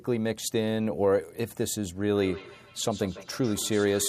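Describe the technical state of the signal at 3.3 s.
At 3.3 s the speech is in a feedback echo between two devices, which runs from 2.13 s to the end. A second device replays the audio, and the first microphone recaptures it. Its echo canceller ignores that foreign playback, so each syllable returns about every 150 ms, peaking around 14 dB below the speech. On a spectrogram, fainter, thinner copies of each onset trail at regular spacing.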